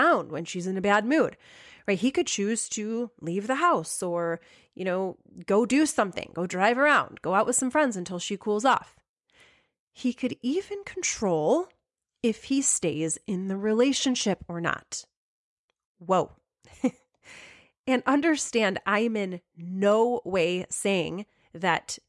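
No technical faults can be heard anywhere in this recording.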